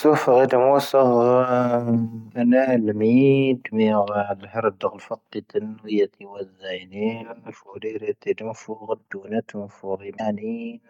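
Right near the end, from about 10.17 to 10.21 s, the speech jumps forward and leaves a short garbled blip, around 40 ms of it. The likely cause is a broken MP3 bit reservoir. Some frames went missing, so the next frame reached back for borrowed bits and decoded another frame's bytes instead. The glitch spans roughly two frames, which fits a frame length of about 24 ms.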